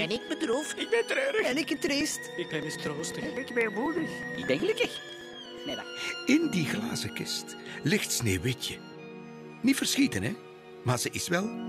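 From 0.16 s to 5.83 s there's a steady run of periodic USB or driver dropouts, one every 0.123 s, so about eight a second and around fifty in total. Each time, something stalls the bus or the audio driver and a couple of milliseconds of audio simply get skipped, so the signal jumps ahead rather than going silent. You hear it as an even ticking riding on the sound, only where there's signal to break up.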